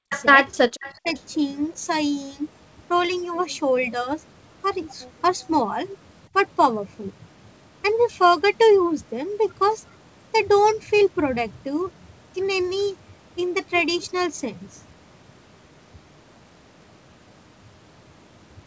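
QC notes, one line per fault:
0.00–0.12 s, speech suppressed in double talk: The speech dips sharply, by roughly 40 dB at its deepest, for about a tenth of a second. Both ends were likely talking at once, so the echo canceller could not tell local speech from loudspeaker echo and turned everything down.
0.10–0.25 s, echo leak: A faint delayed copy of the speech comes back about 381 ms late, roughly 15 dB below the direct speech. A far-end loudspeaker's echo was likely not fully cancelled and was sent back.
0.81–0.94 s, echo leak: The same 381 ms echo returns briefly, weaker, at about 20 dB below the speech.
0.93–1.09 s, speech suppressed in double talk: The speech drops again, by roughly 30 dB, over about 150 ms. This is likely the same overlap of talkers causing the canceller to duck both sides.
1.16–1.21 s, echo leak: A last brief scrap of echo, again 381 ms behind the speech, sits very low at about 35 dB down. 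It is likely the canceller's residual.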